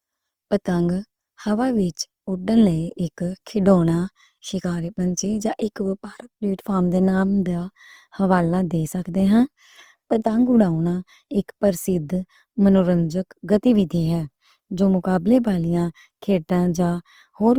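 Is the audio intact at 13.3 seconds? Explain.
No. Opus compression affects 13.3 s as it does the whole clip: the speech sounds grainy and rough, likely from the codec's music mode running short of bits, filling bands with folded or noise-like content, which fits a low bitrate near 24 kbps.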